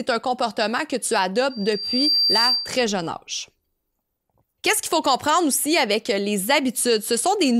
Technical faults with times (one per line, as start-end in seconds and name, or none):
1.50-2.90 loudspeaker feedback squeal